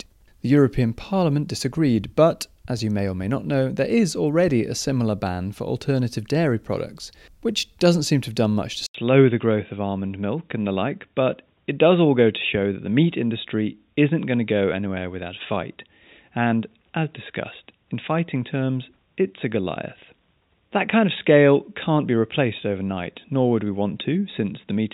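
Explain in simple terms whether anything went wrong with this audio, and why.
At about 8.86 s, right after "have done much to", the sound drops out for a split second (about 80 ms) and then comes back duller and boxier, as if through a cheap headset. That holds to the end of the clip. Nothing above about 3.8 kHz gets through anymore, and a faint new background noise appears, though the loudness stays about the same. It's most likely an input switched to a poorer device partway through the recording.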